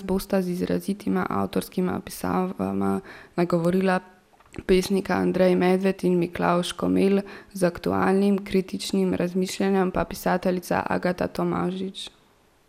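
Bit error spikes occur at 3.65 s and 11.37 s in this speech. Each is a single flipped bit in the digital data, which makes a sample jump by a power of two and snap straight back. The first is heard as one sharp tick, which fits a flip spanning two adjacent samples. The second is a shorter, single-sample click. Both are broadband and have nothing to do with the voice around them.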